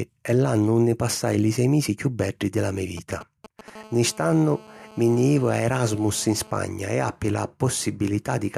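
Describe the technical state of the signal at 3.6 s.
A galloping dit-dit-dit of short buzzes at 217 Hz sits well below the speech from 2.97 to 3.70 s. These are GSM signalling bursts: a nearby 2G phone's short radio bursts are rectified by the audio circuitry.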